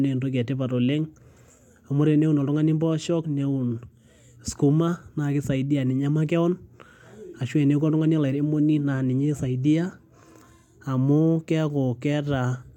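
Speech recording with no audible technical faults: no dropouts, clipping, glitches or level problems anywhere in the clip.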